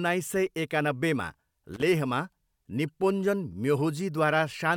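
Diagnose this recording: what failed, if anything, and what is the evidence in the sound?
Analogue wiring's the culprit: a loose connector crackle right after "सय एकानब्बेमा", from about 1.74 to 1.83 s. It's a short, ragged burst of scratching where a worn contact kept making and breaking, chopping the speech signal.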